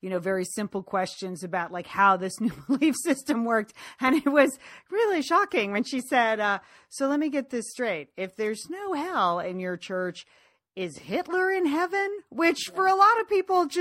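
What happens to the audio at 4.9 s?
Nothing goes wrong at 4.9 s: the speech carries on intact there, with no dropout, click, distortion or other fault.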